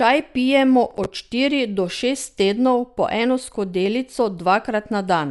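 From the start, the speech sounds dull and rough, with no content above about 11.5 kHz. This is plainly audible codec damage, likely from Dolby Digital compression at a low bitrate, which fits roughly 64 kbps. At that rate the encoder narrows the band and gives many frequency lines no mantissa bits. The decoder fills those lines with dither noise, leaving a fluttering grain around the voiced tones.

From 0.91 to 1.06 s, just before "štiri do šest tednov", a burst of processor overload crackle tears through the sound. The processor fell behind and missed deadlines again and again, about five buffers of around 10 ms each. Each late buffer was filled with a stale piece of old audio with hard edges. The repeated discontinuities come across as a short, gritty crackle that stops once the load passes.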